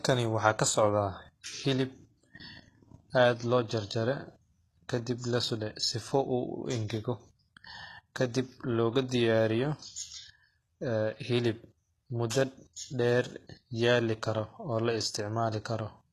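Throughout the speech, treble is rebuilt rather than real, likely from heavy HE-AAC compression at a low bitrate around 16 kbps. S sounds turn gritty and metallic, and a spectrogram shows copied-looking bands cut off sharply at 12.3 kHz.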